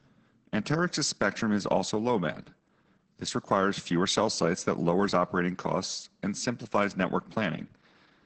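Speech carrying heavy Opus voice compression throughout: nothing above about 8.5 kHz, muffled, hoarse and faintly robotic, consistent with low-bitrate wideband SILK coding, around 10 kbps.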